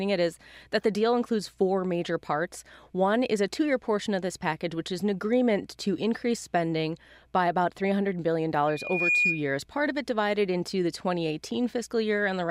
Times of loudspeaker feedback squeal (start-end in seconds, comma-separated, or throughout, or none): 8.67-9.50